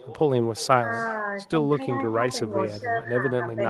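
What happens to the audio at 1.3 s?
At 1.29 s a single lost packet is rebuilt from error correction: a low-bitrate copy fills 20 ms, so there is no gap or smeared repeat like concealment, just a brief rougher, noisier patch. Throughout, echo with no canceller returns the sound roughly 400 ms later at about 21 dB down, a distinct delayed copy rather than diffuse room reverberation.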